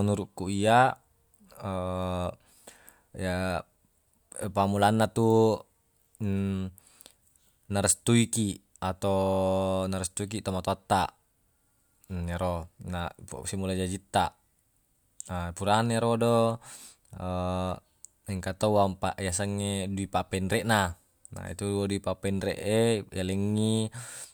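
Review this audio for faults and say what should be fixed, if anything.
Nothing here needs fixing; I listened closely to the speech and heard no technical faults at all.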